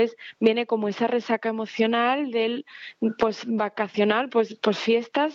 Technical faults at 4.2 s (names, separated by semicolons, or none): none